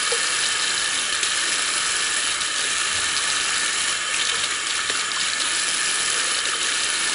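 Throughout the clip, 4-bit ADPCM compression stores each sample as a coarse step from a prediction, consistent with about 88 kbps. This leaves a level-following gritty hiss on every louder passage, roughness on sharp attacks, and nothing above 10.6 kHz, so the top sounds dulled.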